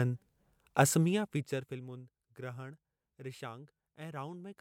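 Nothing in this bit of speech comes across as a technical fault, so there's nothing to point to here.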